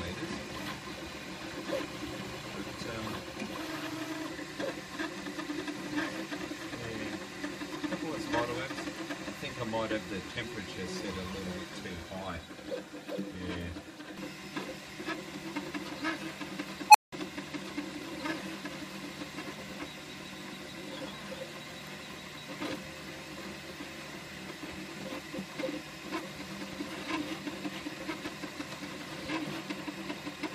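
At 16.9 s a squealing tone of around 1 kHz bursts out of the sound, swelling to a harsh, clipped peak in about 44 ms before the audio drops out entirely for 180 ms, with the disturbance ending by 17.12 s. This is an unstable filter: a recursive filter running with bad coefficients fed its own output back until it grew without bound, clipped, overflowed, and went silent until it reset.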